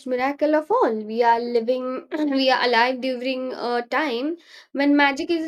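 No technical faults are audible.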